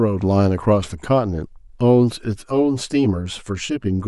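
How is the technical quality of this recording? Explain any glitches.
The speech is clean until 2.33 s, where channel delay (comb filtering) sets in and lasts to the end. One channel arrives around 10 ms late, and summing to mono cancels shared content at evenly spaced notches from around 50 Hz upward, leaving a hollow, phasey tone. Unlike room reverb, it has no decaying tail, only a fixed, static coloration.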